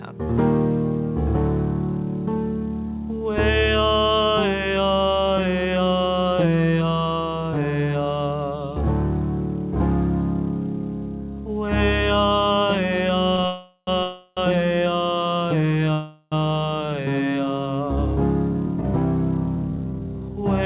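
Two short stalls from late packets come first, at 13.36 to 13.40 s and 13.42 to 13.46 s. Each time a packet missed its slot, the jitter buffer ran dry, and the receiver held the last sound for 16 ms and then 22 ms. You hear a brief catch or slight buzz, with nothing actually lost.

Right after that, three call audio freezes: 13.46 to 13.89 s, 14.03 to 14.39 s, and 15.93 to 16.34 s, roughly 410, 340 and 390 ms of filler. The last sound gets smeared into a fading buzz, and the first one drops to silence for about 30 ms before the audio picks up exactly where it stopped. That points to packets likely held up in the network, so time is inserted rather than removed.

From 17.96 to 20.44 s there's a jitter buffer speed-up. The buffer was carrying extra delay, so the receiver trimmed it by snipping out tiny pitch-period chunks over and over, about 200 ms in total. The audio runs at about 107% speed with the pitch unchanged, so it sounds a bit rushed.

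The whole thing also has nothing above 4 kHz, which fits a G.711 mu-law call at 64 kbps.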